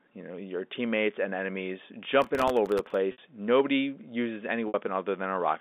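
From 2.22 to 2.94 s, just after "your teammates and enemies", processor overload crackle tears through the speech. Tiny buffers under a millisecond keep missing their deadlines, replaying old audio with hard edges. At 3.12 s and again at 4.68 s, packet loss with pitch repetition bridges a 60 ms gap. It sounds like a held, buzzy note fading into silence before the speech returns with a short cross-fade, which fits two lost packets each time. The narrow telephone band of the G.711 line is audible throughout.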